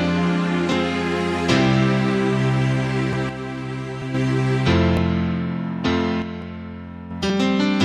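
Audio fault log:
0.72, 3.13, 4.02, 4.97, 6.42 and 7.3 s, dropped buffer (overrun): at each the sound jumps forward with no gap of silence. Most skips are brief, roughly a hundredth of a second, but the one at 3.13 s is longer and the one at 7.3 s longer still. The likely cause is that the recording software fell behind and the hardware overwrote a block of samples before it was read, splicing the surrounding audio together.
3.29 to 4.14 s and 6.22 to 7.11 s, one channel drops out: the sound abruptly becomes quieter, falling by about 6 dB for just under a second each time, then snaps back to full level. Anything present only on the missing side vanishes for that stretch. The likely cause is that one stereo channel stopped delivering signal, so the mono sum carries only half of what both channels shared.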